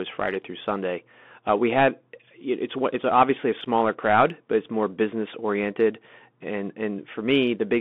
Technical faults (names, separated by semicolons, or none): Bluetooth CVSD headset codec